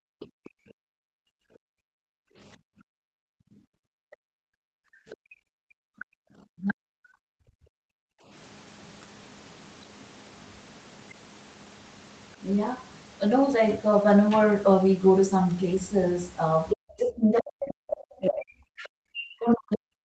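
Right from the start, 0 to 6.26 s, the room background gets clamped by the echo canceller whenever the far end plays: the ambience dips by about 40 dB, in total roughly five seconds of holes, then swells back when the canceller releases. Inside that stretch, the other side's voice leaks through in faint scraps at 0.2 to 0.49 s, 5.1 to 5.16 s and 5.99 to 6.05 s, sitting roughly 20 to 25 dB under the talker. That's likely residual loudspeaker echo the canceller didn't fully remove. At 6.54 to 6.92 s the talker's own speech is suppressed in double talk, dropping by up to about 40 dB for a moment. The likely cause is both sides speaking at once, with the canceller ducking everything because it couldn't tell near speech from echo. The background gating comes back from 7.2 to 8.3 s, another deep dip of about 40 dB that lasts around a second. From 16.73 s to the end, the speech is pushed down again in double talk, with the same deep dips. 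One more brief leak of the far-end voice slips in at 17.69 to 17.73 s, around 20 dB below the talker.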